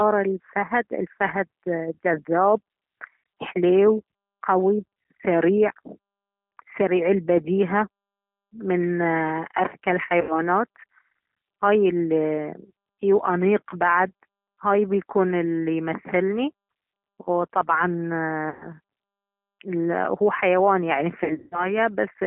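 G.729 codec throughout: the band is held to about 200 Hz to 3.4 kHz, and the low-rate pulse and filter model gives the speech a rough, synthetic edge.

VoIP packet loss concealed by the speech codec at 10.21 to 10.37 s (80 ms missing), 18.49 to 18.69 s (120 ms), and 21.24 to 21.72 s just after "هو حيوان يعني في" (240 ms scattered over 280 ms, longest gap 180 ms). The decoder stretches its last pitch and filter into a fading buzzy tone or coloured noise, and the speech stays weak briefly afterwards.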